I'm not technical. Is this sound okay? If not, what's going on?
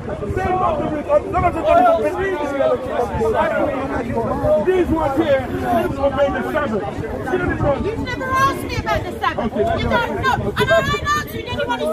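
No, there's one glitch. At about 5.85 to 5.88 s there's a tiny blip from damaged data in a compressed stream. Some of the file's data got corrupted, so the player briefly lost its place and garbled that instant before recovering.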